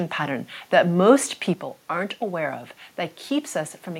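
At 1.54 s the speech drops abruptly by about 6 dB and stays down through to the end. That's most likely one channel dropping out: with one stereo side gone, the mono sum keeps only half the shared signal, so everything sounds suddenly quieter.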